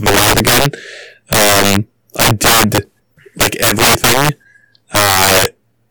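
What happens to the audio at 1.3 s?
At 1.3 s you're hearing integer overflow, which runs through the whole clip. The speech is pushed about 14 dB too hot, and instead of being limited, peaks wrap to the opposite sign. Around 7 percent of samples flip, giving harsh, violent cracks on the louder bits.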